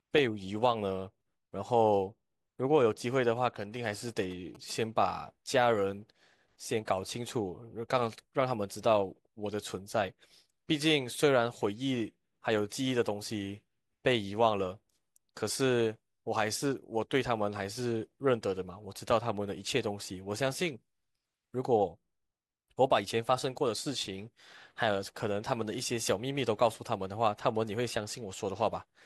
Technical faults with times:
2.90-4.71 GSM signalling bursts

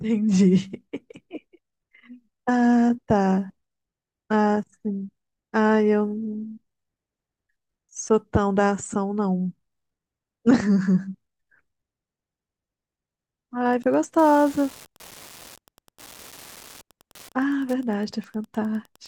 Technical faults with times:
13.71-19.08 Wi-Fi interference

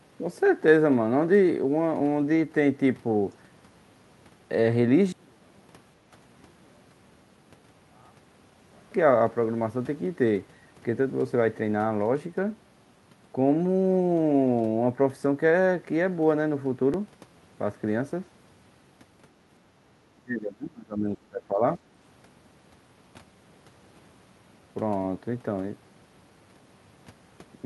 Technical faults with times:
5.12-8.91 one channel inverted
16.94 dropped buffer (overrun)
20.14-21.80 speech suppressed in double talk

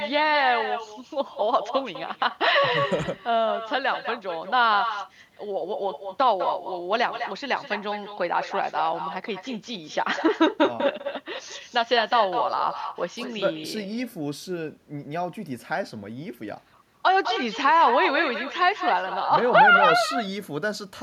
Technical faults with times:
0.00-21.02 echo with no canceller

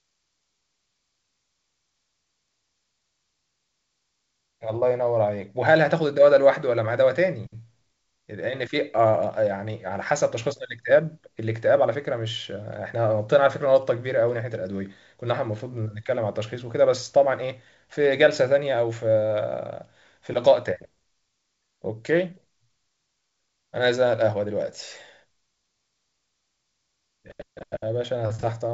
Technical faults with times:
none

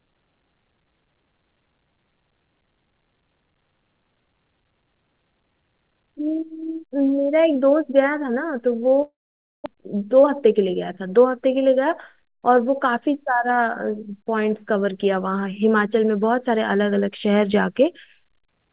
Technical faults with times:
9.02-9.68 long network dropout
9.76-12.57 jitter buffer speed-up

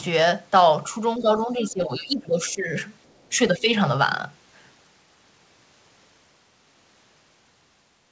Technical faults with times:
1.18-2.73 speech suppressed in double talk
3.07-3.29 other side's voice leaking through
3.29-3.68 speech suppressed in double talk

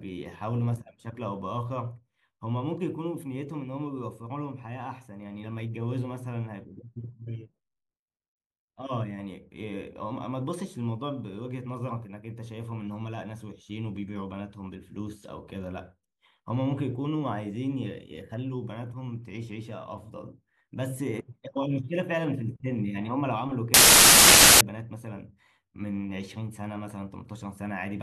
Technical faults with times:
23.74-24.61 samples built from the wrong bytes

